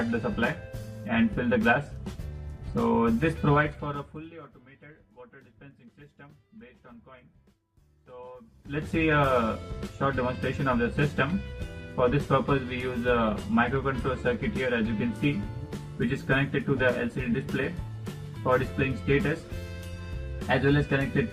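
Zipper noise runs from 8.45 to 8.89 s. A level change of roughly 25 dB is made in unsmoothed 1 dB jumps, around a hundred per second. Each jump clicks, giving a fast ticking over the sound.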